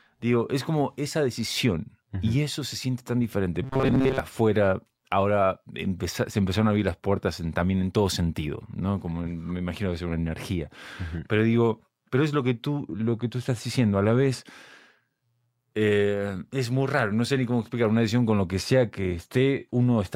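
From 3.63 to 4.19 s, right after "se siente tan diferente", the speech turns into a robotic sound from repeated short buffers. The voice becomes a rigid, metallic buzz near 134 Hz. It still loosely follows the speech. The likely cause is audio arriving too slowly, so the playback repeats its last fragment of about 7.5 ms instead of waiting. Most of that stretch is repeats, and the real audio in between is lost. Normal speech returns at "afuera ahora se empezaron".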